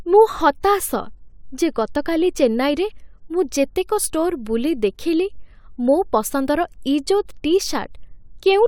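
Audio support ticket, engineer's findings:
No faults found on listening.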